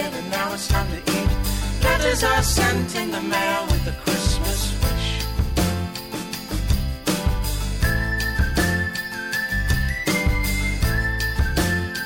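No technical faults can be heard anywhere in this audio.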